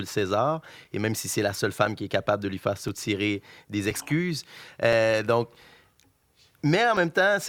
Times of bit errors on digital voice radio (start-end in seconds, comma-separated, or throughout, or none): none